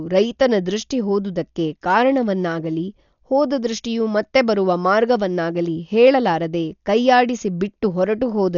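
Dolby Digital compression, most likely, runs throughout the speech, with heavy damage from start to finish. The bitrate is very low, around 48 kbps. At that rate the encoder narrows the band and starves many frequency lines of bits, and the decoder fills them with dither noise. The speech therefore sounds dull and muffled, with a rough, fluttering hiss clinging to voiced sounds.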